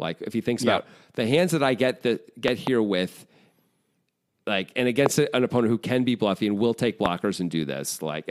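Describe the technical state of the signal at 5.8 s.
At 5.8 s the speech signal is intact, with no audible fault at that moment.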